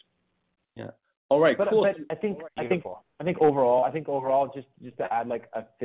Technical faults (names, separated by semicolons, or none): short concealed packet loss